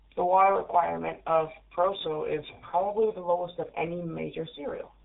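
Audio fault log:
throughout: mains hum. There's a steady low tone sitting under the speech the whole way, pitched at 50 Hz with a few low harmonics stacked on it. It's about 30 dB below the talker, so it's quiet, but it never lets up. That's the power line leaking into the signal path, most plausibly through a ground loop or a transformer sitting close to the gear.
throughout: G.723.1 codec. The speech has been squeezed through G.723.1 and it's been hit hard. Nothing survives above 3.8 kHz, which is why it sounds so muffled and boxed-in. There's also a rough, hoarse edge on the voice, and consonants smear into each other. The codec only models the voice once every 30 ms frame, so fast changes get blurred over. The amount of damage fits a very low bitrate of about 6 kbit/s.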